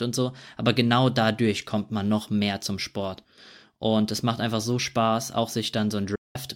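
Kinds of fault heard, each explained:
Digital broadcast dropout: from 6.15 to 6.36 s the speech fades to silence in about 8 ms and stays muted for 192 ms before resuming. The receiver lost the signal or rejected corrupt frames and muted, so about six frames' worth of programme is gone.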